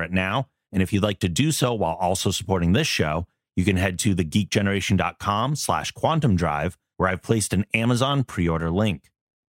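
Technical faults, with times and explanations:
Listening through the speech, nothing stood out as a technical problem at any point.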